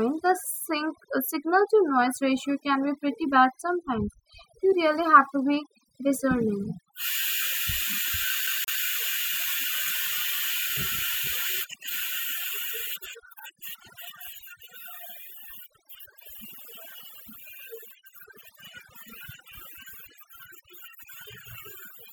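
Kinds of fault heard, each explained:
Overdone noise removal: Throughout the clip the gaps between phrases fall to a near-silent floor dotted with twinkling specks. A noise reduction process was pushed too hard on a noisy recording. Any frequency band close to its estimate of the noise was pulled down or cut entirely, so quieter parts of the voice were stripped away with the hiss, leaving isolated fragments that flicker on and off.
CD stuck on one turn: From 8.47 to 8.82 s the audio stutters in a fast, even way. The same short slice of about 0.18 s plays twice in a row, with a brief mute at each jump back. This is the skipping-disc effect: a scratch sends the laser back one track at the same point on every rotation, so that one revolution's worth of sound repeats instead of the playback moving forward.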